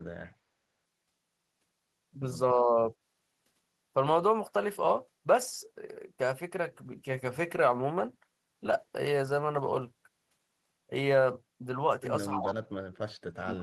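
From 2.54 to 2.76 s the speech dips by roughly 10 dB for about a fifth of a second. This is speech suppressed in double talk, likely caused by an echo canceller that could not tell its own talker apart from loudspeaker echo while both sides were active, so it attenuated everything passing through. The dip is brief and shallow, heard as a momentary loss of level.

At 12.34 s an echo leak appears, lasting until 12.54 s. A copy of the speech arrives 287 ms late at about 10 dB below the direct signal. This is likely residual loudspeaker pickup that the loudspeaker side's canceller failed to remove and sent back down the line.

From 12.34 s to the end of the clip, speech is again suppressed in double talk, this time much more heavily. Level falls by as much as about 40 dB, so the speech is pushed close to inaudibility rather than just softened.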